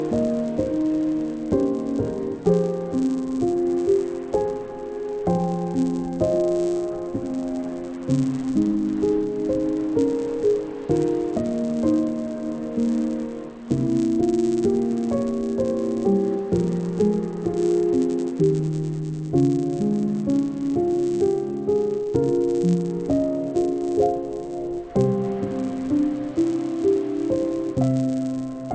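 From start to end, a resampler restarted on every block, converting 44.1 kHz to 16 kHz in 10 ms pieces with no carried-over history, leaves an error at each edge. That yields a 100 Hz buzz, present only with signal, visible as evenly spaced vertical lines in the spectrogram.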